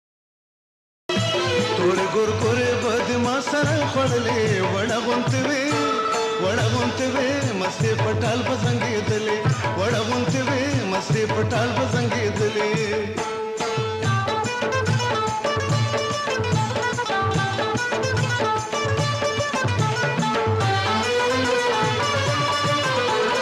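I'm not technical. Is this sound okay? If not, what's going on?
No. A cut-off start: silence until 1.09 s, then the sound begins abruptly mid-way, because the recording started late and missed its natural beginning.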